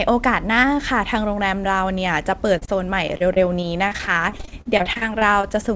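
At 2.58 to 2.63 s and again at 2.65 to 2.69 s there are two short concealed packet losses, about 40 ms and 20 ms of the call missing. In each hole the decoder extended the preceding sound and faded back into the real signal, so each is a brief smear or wobble. They are isolated, with normal audio between and after them, so they don't form the sustained choppy pattern that follows.

From 3.07 to 5.53 s comes repeated packet loss, the robotic kind. Some two dozen holes, none longer than about 40 ms, keep arriving, so roughly a fifth of the stretch is patched-in continuation rather than real audio. Because each fill is followed almost at once by another, the sound turns choppy, with fragments dropping out. The length and density of the run separate it from the two isolated losses before it. Throughout the clip nothing is heard above 8 kHz, which fits G.722 at 64 kbps on the call path.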